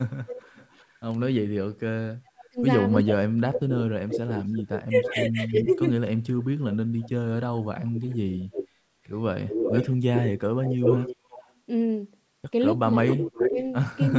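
In this speech clip, a far-end echo canceller likely let part of its loudspeaker pickup through, producing echo leak: a delayed copy of the voice returns at 0.12–0.95 s (307 ms late, about 15 dB down), 2.98–11.53 s (341 ms, about 5 dB down) and 13.09 s to the end (372 ms, roughly as loud as the speech itself). When both sides talked at once, the canceller likely mistook the talker for echo and pulled it down. That is speech suppressed in double talk, cutting the voice by up to about 40 dB across roughly 3 s between 1.8 and 5.84 s, and by about 10 dB for a few tenths of a second between 12.82 and 13.6 s.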